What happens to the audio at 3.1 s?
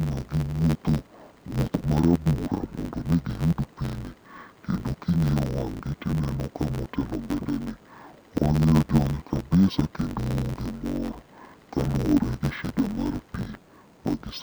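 At 3.1 s the speech is caught up in an interleaved audio read as planar fault that runs through the entire clip. Each block of about 10.9 ms holds alternating left and right samples, but playback treats its first half as left and its second half as right, stretching both to half speed while keeping the overall pace. With blocks this short, the speech sounds dull and robotic, buzzing at about 92 Hz, with no clear octave drop.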